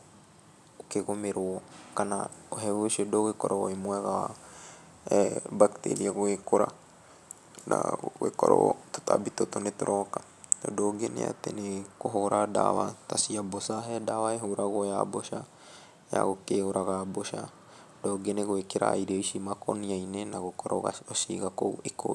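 No technical faults are audible anywhere in the speech recording.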